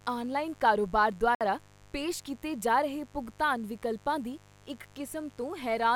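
A raspy mains buzz runs under the speech from start to finish, spiky 50 Hz harmonics leaking in from switching electronics or poor shielding, sitting roughly 30 dB below the speech. At 1.35 to 1.41 s the audio drops to silence for about 60 ms, then carries on, likely a Bluetooth stall where delayed packets left the headphones' buffer empty.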